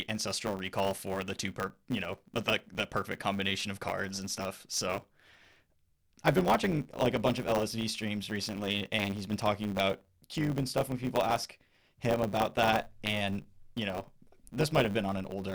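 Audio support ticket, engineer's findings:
Steady buzz at 100 Hz under the speech for the whole clip, 0 to 15.5 s. Delivery runs about 1.07x fast, pitch roughly unchanged. Probable component: block handoff between two processing stages. Block size mismatch (truncated): upstream writes longer blocks than downstream reads, consistent with 512-sample writes. The tail of each block is dropped, about 7% of the audio. The repeating cut at each block boundary produces the 100 Hz buzz and the compressed timing.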